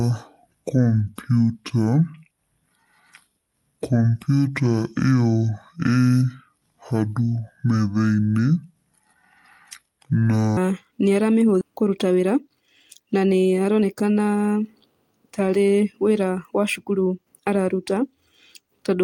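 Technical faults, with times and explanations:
0.00–10.57 s, section at the wrong speed: The speech plays at 0.586 times its recorded rate. Pitch and tempo drop together, roughly ten semitones lower, so the audio sounds deep and dragging. The likely cause is playback against the wrong clock.
11.61–11.63 s, skip ahead: Playback jumps forward and around 0.7 s of speech is gone. Nothing fills the gap, so the two sides meet almost directly. Delay falls by about the same amount, as when an overfull buffer discards waiting audio.
11.71–14.63 s, jitter buffer speed-up: The receiver trims many short pitch-period pieces in quick succession, about 0.3 s in total. The speech runs at 111 percent speed with unchanged pitch, so it sounds hurried while the delay shrinks.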